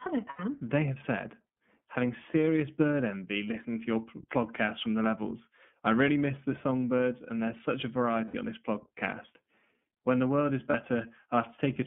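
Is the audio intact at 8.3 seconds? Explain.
No. From 8.25 to 8.35 s, right after "and there's such a", packets drop out and the iLBC decoder covers roughly 90 ms, which fits three lost 30 ms frames, by repeating the last pitch cycle mixed with noise. You hear a brief held, slightly buzzy vowel instead of real speech. Since each frame decodes on its own, the voice is back to normal by "on this podcast".

Under that, the whole line runs through the iLBC codec at 13.33 kbps, with the band held to 150 Hz to 3.4 kHz. That narrowband coding gives the speech a plainly audible rough, slightly synthetic edge at 8.3 s too.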